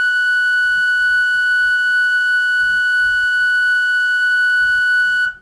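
From 3.0 s to the end, the music picks up a steady ticking, four times a second. That's a resampler restarted on every block: each 250 ms chunk was converted on its own, so every block edge gets a small error. The pattern fits a 48 kHz to 24 kHz conversion.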